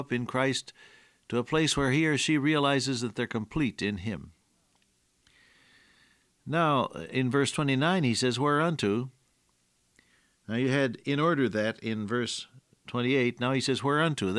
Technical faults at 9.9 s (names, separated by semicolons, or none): none